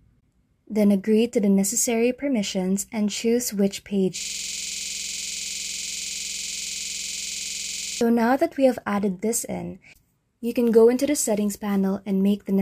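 From 4.21 s to 8.01 s the audio stops moving forward and turns into a hard, rapid stutter, a rough buzz at about 21.5 Hz as one 46.44 ms fragment repeats exactly, roughly 80 times in a row. This is a system hang loop: the computer or its audio driver stalled, and the sound hardware kept replaying the last filled ring buffer because nothing new arrived. The loop length fits a 2048-sample buffer.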